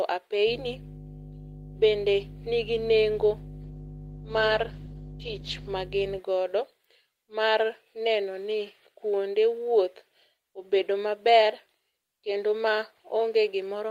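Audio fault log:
0.45–6.2 s, mains hum: A ground loop or nearby transformer is leaking the 50 Hz power line into the signal path, laying a steady low drone with some low harmonics under the speech at a fairly strong level, roughly 10 dB below it.
3.64–5.77 s, call bitrate drop: The call's bandwidth estimate collapsed and the encoder was forced to far fewer bits for about 2.06 s, which fits a fall from 32 to 14 kbps. Coarser coding and lost high frequencies leave the speech rough, watery and muffled until it recovers.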